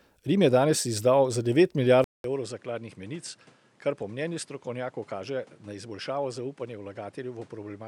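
Input switched to a poorer device at 2.04 s, right after "danes izdal za devet", lasting to the end of the speech. A 200 ms silence marks the changeover, likely the system swapping to another microphone or a headset's call profile. From there the band stops near 11.4 kHz, so the voice turns duller and boxier, drops about 10 dB in level, and carries a new background noise roughly 30 dB below it.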